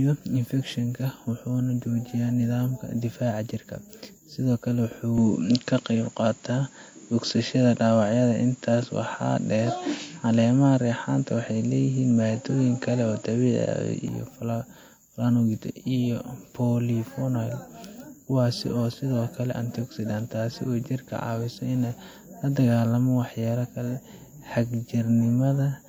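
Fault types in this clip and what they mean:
Input switched to a poorer device: right after "sidoo kale" at 5.18 s the sound abruptly loses everything above 7.6 kHz, shifts in level by around 5 dB and picks up a faint new noise floor, likely a change of microphone, until it clears at 14.08 s.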